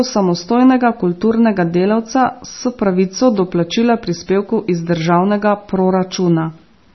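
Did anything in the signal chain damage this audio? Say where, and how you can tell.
Yes, at the codec stage, throughout the speech. Nothing remains above 5.9 kHz, and the sound is watery and swirly, with smeared attacks. That points to heavy MP3 compression, likely near 24 kbps, which zeroed weak lines frame by frame. A plain low-pass filter would sound dull but not swirly.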